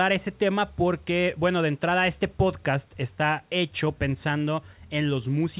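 No technical faults can be heard in the speech. The call path audibly limits the sound to the telephone band, with nothing above about 4 kHz, which fits an A-law telephone codec.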